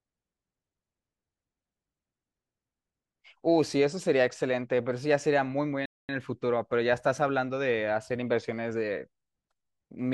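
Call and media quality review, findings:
Speech drops to dead silence mid-flow at 5.86 s, 233 ms gap to 6.09 s, then carries on. Playback stall, likely in the player: buffer ran dry or output thread blocked, so nothing reached the output until it recovered.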